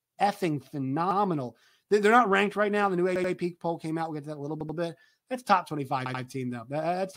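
Repeated buffer faults occur at 1.11, 3.16, 4.61 and 6.06 s. New audio arrived late, so the device replayed its last 85 ms block, which fits a 4096-sample buffer. The speech stutters, repeating once at first and twice afterwards, with hard joins and nothing lost.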